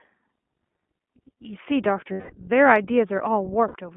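Throughout the speech, the iLBC codec is at work. The band stops around 3.4 kHz, so there is no treble, and little sits below 200 Hz. Each 20 ms frame is coded on its own, which leaves the voice clear but slightly rough and synthetic. The damage is plainly audible. Its character fits the 15.2 kbps mode. Unlike a wideband codec's smearing, the loss here is the missing top end plus a grainy excitation texture.

Lost iLBC frames break in twice. From 2.12 to 2.34 s, about 200 ms drops out, which fits ten consecutive frames. From 3.68 to 3.76 s, 60 ms is lost. In both gaps the decoder repeats the last pitch cycle blended with noise, giving a held, buzzy, breathy vowel that fades across the longer gap. Unlike a hard dropout or a stutter, there's no silence or repeated syllable, and the voice snaps back immediately after each gap.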